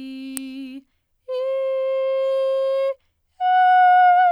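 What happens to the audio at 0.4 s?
At 0.37 s an electrical switching spike cuts through the music as a single sharp snap, likely a nearby switch or static discharge arcing into the line. The waveform shows one isolated needle; the spectrogram, a thin full-height vertical stripe.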